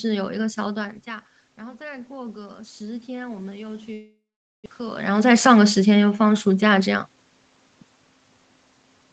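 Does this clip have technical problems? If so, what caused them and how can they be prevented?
Yes. From 1.05 to 5.07 s there is automatic gain rising. The input fell by about 16 dB and the gain control climbed about 8 dB to compensate. The voice and the room background swell together, which distinguishes it from a talker simply moving closer, where only the voice grows. Keeping a steady microphone distance, or using a slower gain control, prevents this.

From 3.93 to 4.68 s comes a long network dropout. The last sound is stretched into a fading buzz for about 0.7 s, with roughly 0.44 s of silence inside it, and about 0.6 s of audio never returns. The network delay also jumped by around a tenth of a second. Unlike a natural pause, the sound resumes mid-stream with a piece missing. The likely cause is a network stall. A more stable connection with forward error correction would prevent it.

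From 6.66 to 7.31 s there is a jitter buffer speed-up. After the backlog, the receiver trimmed roughly 70 ms in small pitch-period slices, so the audio runs at about 111% speed. The pitch stays unchanged, which distinguishes it from a sample-rate or playback-speed error. Steadier packet delivery, or a gentler buffer adaptation, prevents this hurried stretch.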